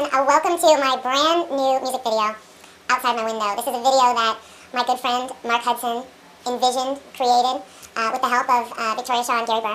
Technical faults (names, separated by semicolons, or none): wrong sample rate